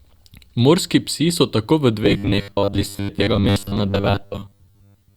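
From 2.04 s, after "psi so tako v", onward: robotic sound from repeated short buffers, a metallic 100 Hz buzz, likely 10 ms chunks looped while most speech is skipped.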